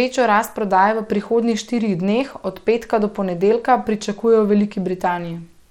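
Throughout the speech, the link appears to be carrying the audio through a starved Bluetooth SBC compression stage, likely running at a low setting that fits a bitrate near 96 kbps. With so few bits to share, the upper sub-bands are left nearly empty and the rest are quantised coarsely. The treble thins out and flickers from moment to moment, and a plainly audible gritty, aliased roughness rides on the sound for the whole clip.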